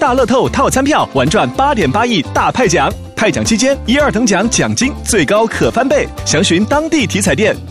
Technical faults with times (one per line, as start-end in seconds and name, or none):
none